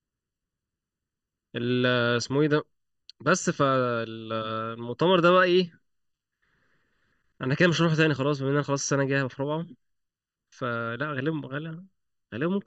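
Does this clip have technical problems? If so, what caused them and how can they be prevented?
Yes. Channel delay (comb filtering) runs throughout: one channel arrives under a millisecond late and the pair is summed to mono, so the speech cancels at evenly spaced frequencies starting near 700 Hz, sounding hollow and phasey. Aligning channels before any mono fold-down prevents this.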